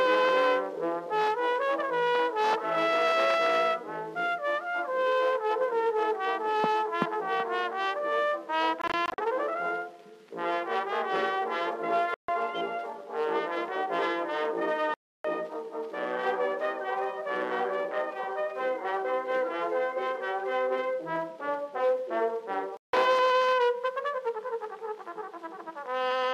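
The audio has four silent gaps where the sound cuts out and then resumes further along, as if it had kept playing underneath. The first, from 8.82 to 9.18 s, is broken into several short holes totalling about 0.14 s, the longest about 41 ms. The others are solid gaps at 12.14 to 12.29 s, 14.94 to 15.25 s and 22.77 to 22.93 s. This is likely Bluetooth dropout, with packets arriving too late over the wireless link and being discarded.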